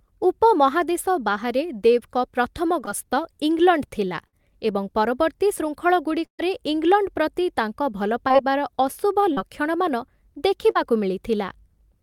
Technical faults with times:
2.85-2.89 short concealed packet loss
4.27-4.35 burst of packet loss
6.25-6.40 burst of packet loss
8.28-8.33 short concealed packet loss
9.33-9.38 short concealed packet loss
10.71-10.77 short concealed packet loss

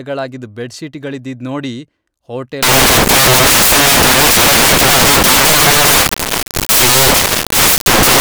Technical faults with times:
2.63-8.20 samples built from the wrong bytes

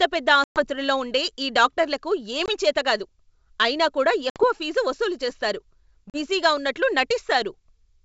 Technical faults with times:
0.44-0.64 packet loss on an ADPCM call
2.46-2.50 packet loss on an ADPCM call
4.30-4.45 packet loss on an ADPCM call
6.10-6.19 packet loss on an ADPCM call

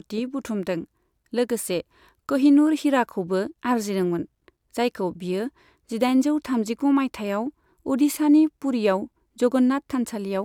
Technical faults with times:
none

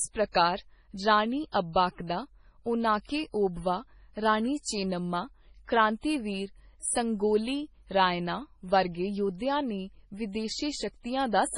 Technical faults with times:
0.00-11.57 MP3 compression

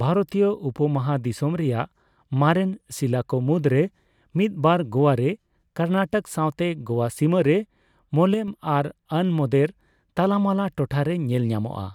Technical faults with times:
8.34-8.48 sudden gain jump

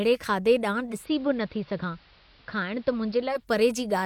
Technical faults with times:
0.86-3.46 digital radio blending to analogue

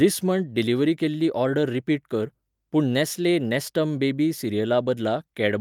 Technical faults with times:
none

